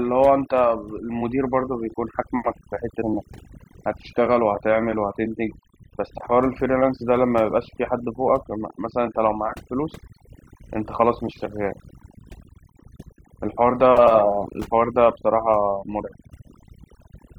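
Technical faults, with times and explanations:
Throughout, overdone noise removal. A noise reduction process was pushed too hard on this speech. Whenever a frequency band sits close to the level it treats as noise, it cuts that band far down or mutes it. The background drops and breaks up into twinkling specks where isolated bands flicker on and off. Softer parts of the speech fall below the threshold and are stripped away too.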